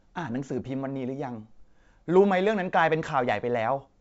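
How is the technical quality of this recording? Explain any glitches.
There are no glitches in this speech recording. It carries the sound of G.722 wideband telephone coding at its full 64 kbit/s rate, with the audio reaching up to about 7 kHz and at most a faint hiss in the band above 4 kHz.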